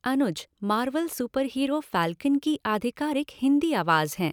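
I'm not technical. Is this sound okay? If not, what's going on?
Yes, nothing's wrong with this recording; there's no fault to point to anywhere in it.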